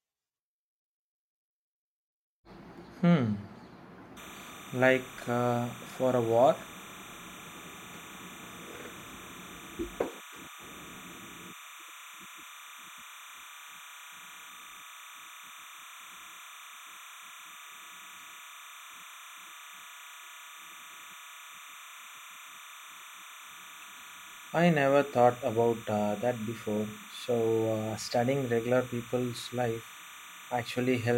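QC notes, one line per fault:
4.17 s to end, timecode bleed: linear timecode at 30 frames per second is leaking in from a neighbouring track or cable. Its square wave flips between pitches near 1 and 2 kHz, leaving a steady chirping warble under the speech, roughly 20 dB below it.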